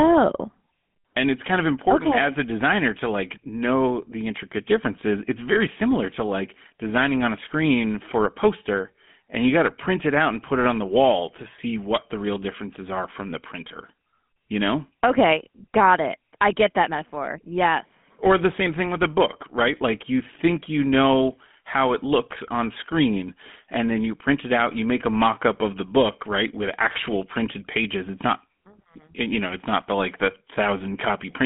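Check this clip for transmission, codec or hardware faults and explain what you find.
One fault runs through the whole clip: GSM full-rate codec damage. A vocal-tract model excited by coarse, regularly spaced pulses, consistent with a 13 kbps stream, gives the speech a plainly audible buzzy, gravelly roughness. The band is roughly 150 Hz to 3.4 kHz, with nothing above 3.8 kHz.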